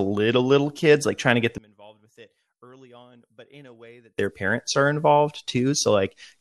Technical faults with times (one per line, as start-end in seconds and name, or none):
1.58-4.18 one channel inverted